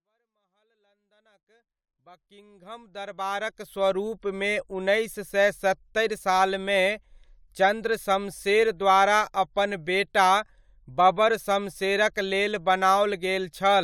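A speech recording with nothing technically wrong to point at, just a gentle fade-in from the very top that reaches full level by about 4.0 s, the way an editor would ease it in.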